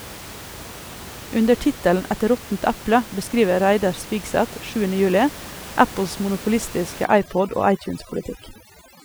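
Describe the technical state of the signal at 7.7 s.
At 7.7 s the speech sits over a reduced, twinkling background: overdone noise removal, from 7.05 s to the end, muting quiet frequency bands mistaken for noise.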